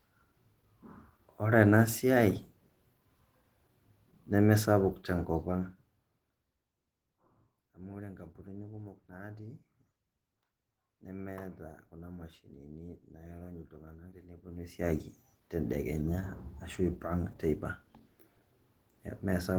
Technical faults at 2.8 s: Opus voice compression

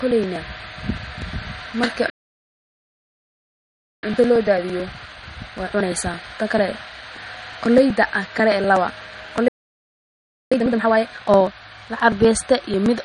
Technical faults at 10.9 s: MP3 compression; periodic USB or driver dropouts; time-compressed catch-up

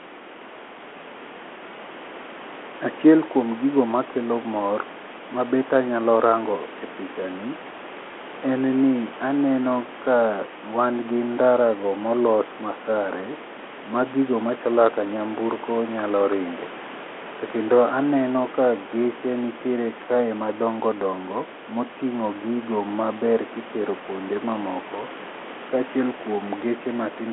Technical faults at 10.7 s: none

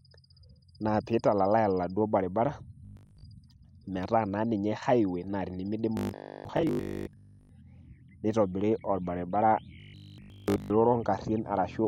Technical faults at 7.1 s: robotic sound from repeated short buffers

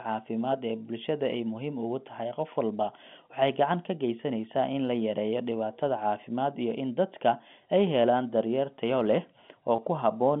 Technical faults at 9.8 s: packet loss with pitch repetition

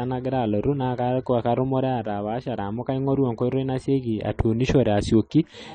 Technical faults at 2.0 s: AAC compression

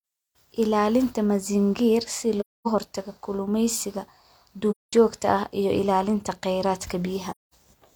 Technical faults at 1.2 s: none

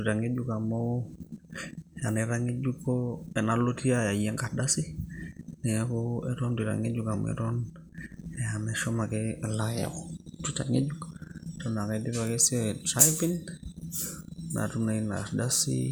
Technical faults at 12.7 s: none

